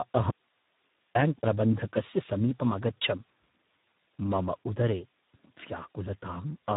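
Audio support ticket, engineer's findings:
Speex codec, throughout. Heavy CELP damage, hoarse, noisy, edging robotic; starved excitation fits roughly 8 kbps narrowband mode. Nothing above 3.8 kHz.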